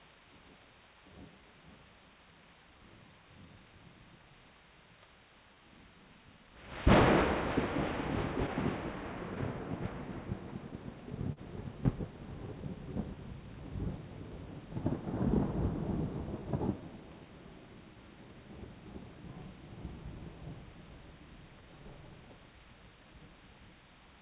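Clock drift between sender and receiver runs through the whole clip: the sender's clock is about 1.5 percent slow, so the receiver's jitter buffer keeps draining. The receiver has to pad the audio to stay in step, and small timing hiccups recur unevenly across the clip.

From 0.16 to 6.5 s, repeated timing corrections play the audio at 98 percent speed. Short pieces are repeated or stretched, adding roughly a tenth of a second in total. The result is a faintly dragging, slightly unsteady tempo, with occasional soft hiccups where pieces are doubled.

At 11.33 s there is a short stall from a late packet. The packet missed its slot and the buffer ran dry, so the receiver held the last sound for 41 ms until the packet arrived. Nothing is lost, but the sound hangs briefly with a slight buzzy smear, and the playback delay grows by 41 ms.

From 13.15 to 23.72 s, the repeated timing corrections return, gentler this time, at 99 percent speed, adding roughly 150 ms across the stretch. 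The pacing loosens a little, and scattered small stutters come from repeated fragments, all heard through the G.711 call path's band limit at 4 kHz.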